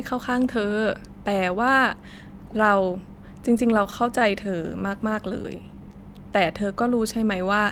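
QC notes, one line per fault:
3.49–4.89 s, repeated stalls (stutter): packets arrived late, so the jitter buffer drained twelve times, each gap up to 20 ms, and the receiver stretched the last sound to bridge them. About 127 ms of filler, 9% of the span, with nothing lost, makes the sound catch and drag.
5.34–5.93 s, jitter buffer slow-down: with its reserve low, the buffer rebuilt depth by repeating single pitch periods, adding 95 ms. Playback drops to 85% speed while pitch holds, so the sound is drawn out.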